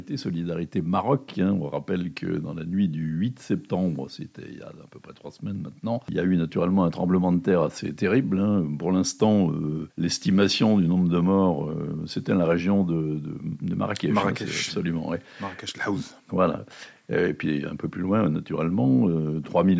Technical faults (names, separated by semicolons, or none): none